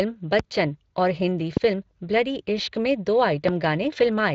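Speex codec damage runs through the whole clip. This CELP speech codec models the voice with a limited excitation budget. The plainly audible damage fits a setting of about 20 kbps.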